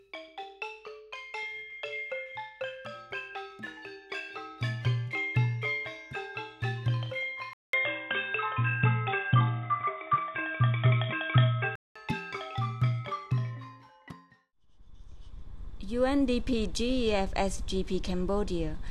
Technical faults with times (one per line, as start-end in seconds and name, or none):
7.53-11.95 input switched to a poorer device